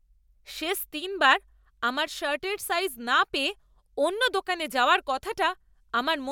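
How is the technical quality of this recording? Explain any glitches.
No technical faults can be heard anywhere in the recording; the speech signal stays continuous and stable throughout.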